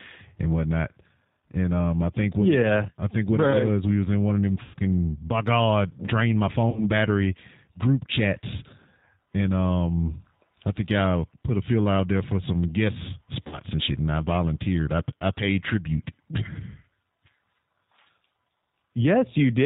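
Throughout, the G.729 codec at 8 kbit/s rebuilds the speech from a filter and sparse pulses. Nothing above 4 kHz survives. The voice sounds plainly rough and synthetic.

At 4.63 s, after "in one of them", VoIP packet loss concealed by the speech codec appears. The decoder stretches the last sound into a fading buzzy tone or coloured noise. It recurs at 6.70 s, between "drain my" and "battery group chats", and at 13.47 s, between "there for some guest" and "and shit and I".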